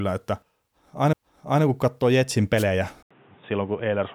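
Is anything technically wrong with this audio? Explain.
Yes, three separate faults can be heard.

At 1.13 s there is a CD skip. The laser jumps to another turn of the disc's spiral, so playback mutes very briefly and resumes from a different point. It sounds like a tick with a jump in the speech. A waveform shows a tiny gap and a discontinuity. A spectrogram shows a thin vertical line.

From 2.57 to 2.64 s there is a wireless microphone noise hit. Multipath reflections cancel the FM radio signal, and receiver noise rises through the fade. It is heard as a short burst of static. A spectrogram shows a broadband smear across all frequencies, and the waveform shows a hashy patch.

From 3.03 s to the end the sound turns dull and boxy after an 80 ms silence. Nothing reaches above 3.8 kHz, and a new background noise sits about 30 dB below the speech, while loudness stays about the same. The likely cause is the input switched to a poorer device, which passes a narrower band and brings its own noise floor. 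A spectrogram shows a hard ceiling at 3.8 kHz after a blank gap. The waveform shows the gap with no change in envelope height.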